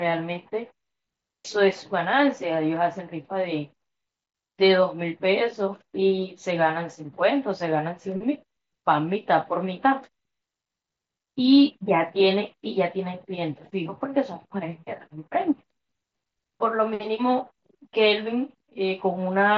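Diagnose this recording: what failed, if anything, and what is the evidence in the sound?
Nothing failed in this recording; the speech arrives over the Bluetooth mSBC headset link as that codec normally delivers it, and there is no fault to point to in the sound.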